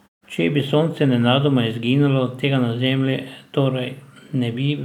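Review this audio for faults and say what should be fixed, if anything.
Nothing needs fixing; no faults are present.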